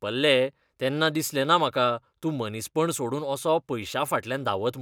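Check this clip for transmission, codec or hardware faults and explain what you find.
No transmission, codec or hardware faults turn up in this clip.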